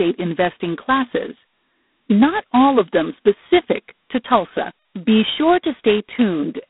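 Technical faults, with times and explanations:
throughout G.726 ADPCM: a harsh, rasping hiss rises and falls with the speech, and nothing passes above 3.9 kHz. This fits coarse 16 kbit/s difference coding.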